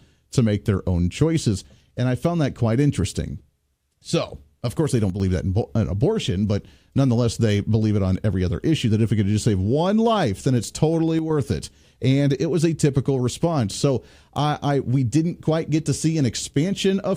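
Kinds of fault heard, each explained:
One channel drops out: one side of the stereo feed likely cuts out for a moment, so when both sides are summed to mono the speech they share loses half its contribution and sinks abruptly by about 6 dB. It happens twice, from 5.10 to 5.20 s, between "of course they don't" and "that in", and from 11.19 to 11.30 s, just after "life then it's totally", each dip lasting about a tenth of a second.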